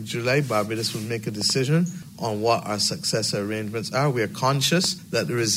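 A double loud pop at 1.41–1.52 s, peaking about 5 dB above the sound, and a single, sharper one at 4.84–4.87 s, about 10 dB above, likely from a switch or static discharge. Each shows as a tall spike in the waveform and a bright vertical stripe across the spectrogram.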